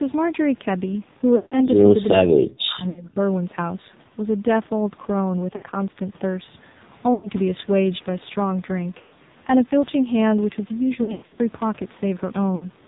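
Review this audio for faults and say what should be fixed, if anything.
The whole clip is speech carried through the AMR narrowband mobile codec at a low rate, about 5.9 kbps, and the damage is heavy. With 8 kHz sampling nothing above 4 kHz survives, so consonants are dull. At this bitrate the vocal-tract model gets only a few excitation pulses per subframe, which makes the voice buzzy and synthetic. Prevention: carry the call at a higher AMR mode or use a wideband codec such as AMR-WB end to end.

Lost AMR speech frames occur at 1.36 to 1.62 s, 2.90 to 3.08 s, 5.56 to 5.63 s, 7.14 to 7.29 s, 8.98 to 9.19 s, 11.04 to 11.39 s and 12.56 to 12.67 s. The decoder covers each gap by repeating the last good pitch and spectral settings at decaying gain. The 60 ms gaps are short. At 1.36 s, 160 ms of sound stretches and fades, which fits a run of about eight 20 ms frames. Around 9.0 s and 11.0 s the losses are scattered, with runs of up to 100 ms, so the speech breaks up repeatedly. 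Prevention: improve radio coverage or add stronger channel protection and jitter handling.

From 2.16 to 3.20 s the talker's level pumps down for about a second in total, dropping by roughly 40 dB at its deepest. The sound dips and overlaps the frame loss near 2.9 s. This is likely speech suppressed in double talk, where the echo canceller cannot tell the near talker from loudspeaker echo and attenuates both. Prevention: tune the echo canceller's double-talk detector and reduce acoustic coupling on the talker's device.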